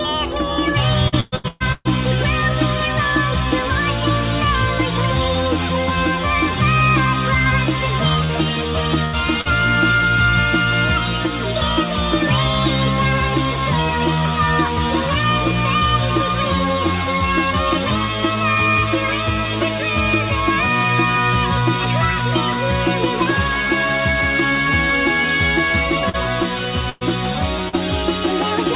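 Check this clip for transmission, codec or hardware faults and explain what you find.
Yes, the clip has packet-loss faults in three forms, clustered near the start, around 8 to 9.5 s, and around 26 to 28 s. The whole clip is band-limited with nothing above 4 kHz, which points to a narrowband telephone codec such as G.711 on the call path.

Repeated packet loss (robotic sound), 1.08 to 1.88 s: This stretch sounds choppy, with a stuttering quality and pieces of the sound missing. Five separate gaps fall inside these 0.8 s, together about 0.48 s of lost audio, the longest about 127 ms. The receiver patched each hole by extending the preceding sound. Because about 61% of the stretch is synthetic fill rather than real audio, the repeated patching becomes the dominant texture.

Short concealed packet loss, at 8.25 to 8.32 s, 9.41 to 9.48 s, 26.09 to 26.16 s and 27.69 to 27.76 s: Each is a brief smear or wobble, where the sound wobbles for an instant and may lose a short transient. 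About 40 ms failed to arrive in time each time. The decoder bridged the hole by continuing the last sound, either from its pitch or as shaped noise, then crossfaded back into the real signal.

Burst of packet loss, 9.05 to 9.16 s and 26.89 to 27.04 s: Here the sound briefly holds and buzzes or fades into hiss, then jumps ahead with a piece missing. Several consecutive packets were lost, about 80 ms in the first burst and about 120 ms in the second. That is too long for the concealment to extend convincingly, so the substitute sound was turned down as the gap went on, and playback resumed past the lost portion.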